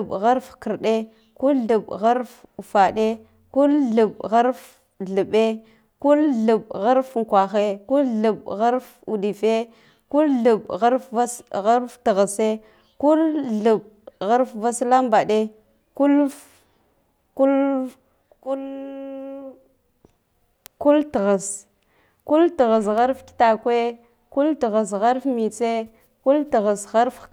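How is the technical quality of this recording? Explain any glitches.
The recording has one glitch, an electrical switching spike at 22.98 s. A nearby switch, motor or static discharge likely arced, and the audio line picked up that brief burst of interference. It adds a sharp snap or tight cluster of clicks, a few milliseconds long and peaking around -20 dBFS, on top of the speech.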